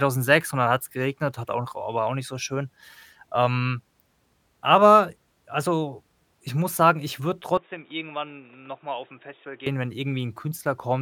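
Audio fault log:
7.57–9.67 s, input switched to a poorer device: after "muss sagen ich würde" the speech turns dull and boxy with no gap at the switch, drops about 10 dB, and gains a noise floor roughly 30 dB down. The spectrogram shows everything above 3.8 kHz suddenly gone, which likely points to a headset call profile, and the waveform shows a smaller envelope.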